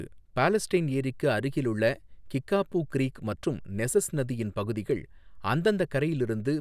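No technical faults are audible.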